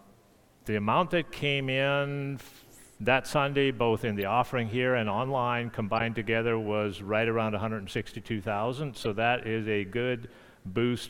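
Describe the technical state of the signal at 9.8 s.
At 9.8 s the signal is intact, with no dropout, distortion, glitch or other fault to be heard at that moment.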